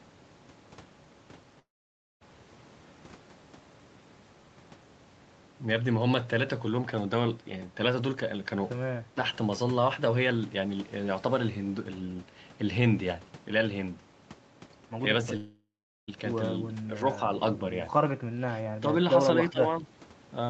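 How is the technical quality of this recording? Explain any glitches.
Two kinds of glitches break up the speech, on a call-quality signal whose top end stops at 8 kHz.

The long network dropouts occur at 1.59–2.23 s and 15.37–16.10 s, losing about 0.6 s and 0.7 s of audio. The cause is likely packets that never arrived. Unlike a clean cut, the last sound smears into a fading buzz before settling into silence, and the speech then resumes further along.

The speech suppressed in double talk occurs at 16.75–17.21 s, 18.80–18.89 s, 19.36–19.61 s and 19.81–19.91 s. The speech stays present but briefly dips, by about 5 dB in the first case and about 10 dB later. That is likely an echo canceller ducking this talker while the far side spoke. Nothing is replaced by a fading buzz, which sets these apart from the dropouts.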